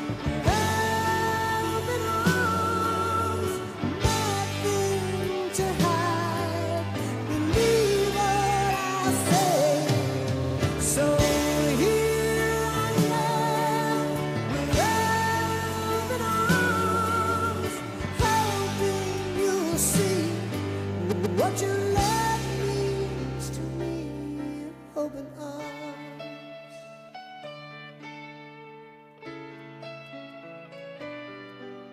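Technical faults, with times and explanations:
10.43–10.57 s and 21.11–21.39 s, repeated frames: a block of about 70 ms, then one of about 139 ms, each plays twice more, adding 139 ms and 279 ms. This is a rhythmic stutter of identical material, not a gap or dropout.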